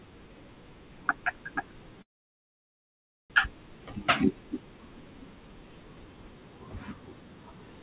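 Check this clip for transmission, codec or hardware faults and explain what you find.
One transmission fault stands out, in a speech recording that comes through a narrowband call path with nothing above 4 kHz, consistent with G.711.

From 2.02 to 3.32 s there is a call audio freeze. Packets were most likely held up and the jitter buffer ran dry. The last sound is briefly stretched as a fading buzz or hiss, then about 1.25 s of silence before the speech resumes where it stopped, 1.28 s late, with nothing lost. On a waveform this shows as a flat gap, and on a spectrogram as a blank column.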